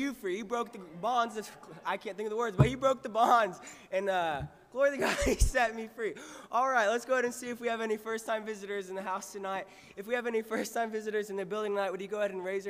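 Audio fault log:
0.00 s, damaged data in a compressed stream: corrupted bytes at the very start make the decoder misread frames and hunt for sync. A brief blip results.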